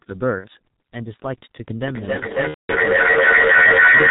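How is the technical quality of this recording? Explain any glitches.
The technical quality is poor: the whole recording is muffled and hoarse, it has two dropouts, and the second half is swamped by a looping echo.

The muffled, rasping character runs from start to finish and comes from the G.723.1 codec. The damage is heavy: nothing above 4 kHz survives, so consonants smear together and sibilants lose their edge. The codec works in 30 ms frames and its model of the voice adapts sluggishly, which leaves the speech sounding grainy and hoarse. The thinness fits its 6.3 kbit/s mode.

The first glitch, VoIP packet loss concealed by the speech codec, falls between 0.38 and 0.47 s. About 60 ms of audio briefly turns into a drawn-out, fading sound and then recovers. That length fits two lost 30 ms frames. The decoder filled the gap by repeating its last pitch and spectral shape at falling gain.

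The second packet-loss glitch, from 2.48 to 2.73 s, is longer. About 210 ms of speech is lost: a brief drawn-out, fading sound, then the codec mutes from the third lost frame onward. Because each concealed frame is built from the one before, the speech stays weak and distorted for a short while after real audio resumes.

From 1.87 s to the end there is feedback echo between two devices. The speech comes back roughly every 300 ms, thinner and more metallic each time. The echo does not fade: the repeats pile up and reach about 14 dB above the speech itself. Two devices in the same room were on one call, each microphone picking up what the other speaker played. Neither device's echo canceller could remove sound it had not played itself.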